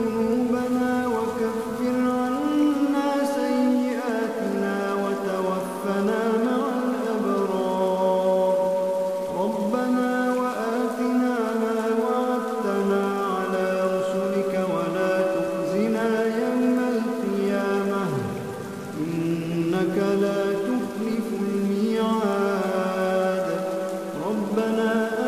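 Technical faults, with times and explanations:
No technical faults can be heard, so there are no times or explanations to give.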